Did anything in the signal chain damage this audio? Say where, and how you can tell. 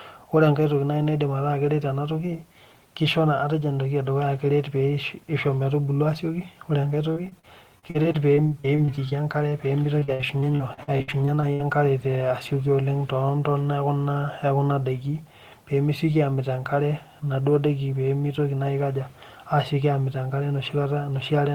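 Yes, the damage happened on the network path, with repeated packet loss (robotic sound) from 7.13 to 9.13 s and again from 9.99 to 11.61 s. The first stretch has 14 gaps of up to 40 ms, roughly a sixth of it patched. The second has 15 gaps of up to 63 ms, nearly a third patched. The decoder extends the last sound across each hole, which makes the audio choppy. A spectrogram shows repeated smeared harmonic blocks, and the waveform shows copied cycles with abrupt joins.

A short concealed packet loss falls between them, at 9.49 to 9.53 s, where about 20 ms went missing and was filled in. It sounds like a brief smear or wobble. On a spectrogram it is a tiny frozen patch, and in the waveform it is a repeated cycle blending back into the real signal.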